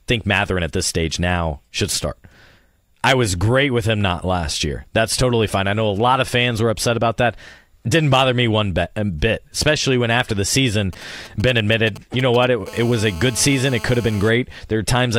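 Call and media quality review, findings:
GSM signalling bursts, 10.93 to 12.67 s: galloping dit-dit-dit groups of short 217 Hz buzzes, around 20 dB below speech. Nearby 2G handset signalling before call setup; audio circuit rectifying its intermittent radio bursts.

GSM phone buzz, 12.67 to 14.29 s: steady raspy 217 Hz buzz, harmonic-rich, unrelated to speech, about 19 dB below it. Same handset now in call, bursting 217 times a second; RF pulses rectified into the audio path.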